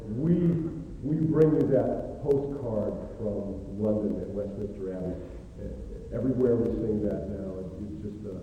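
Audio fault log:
0.08–8.32 s, periodic USB or driver dropouts: a tiny slice of audio, a fraction of a millisecond, is skipped about every 64 ms, roughly 150 times. Something is stalling the USB bus or audio driver on a fixed cycle, so each skip leaves a small discontinuity heard as a steady ticking under the signal.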